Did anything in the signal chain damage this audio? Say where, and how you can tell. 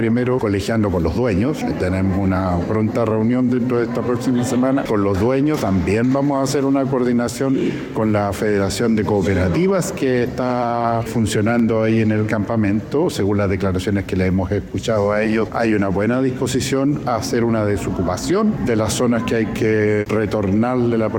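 Yes: three isolated clicks at 6.12, 9.54 and 11.59 s, each a thin vertical spectral line, are likely dropped samples at the driver or buffer stage. A fraction of a millisecond of waveform vanishes, so unlike a dropout no gap is heard.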